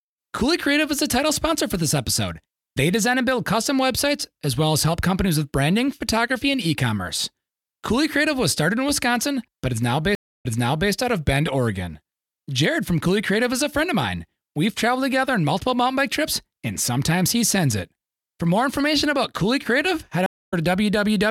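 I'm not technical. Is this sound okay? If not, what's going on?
No. There are two stream reconnects. The connection dropped, the player went quiet, then reconnected and picked the speech up again. At 10.15 s, right after "but is now", the sound stops for about a quarter of a second. It comes back about half a second earlier, so a bit of speech repeats before "out of". At 20.26 s there is another gap of about a quarter of a second. This time the speech resumes slightly later, so a small piece is skipped.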